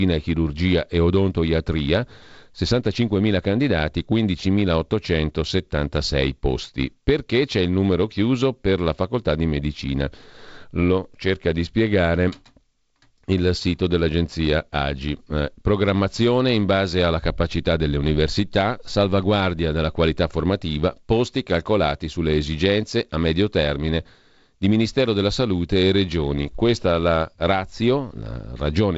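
Nothing goes wrong anywhere in this speech; it's simply carried over G.722 wideband telephone coding at 48 kbit/s, with the sound topping out at about 7.7 kHz and only the light coding texture that mode brings.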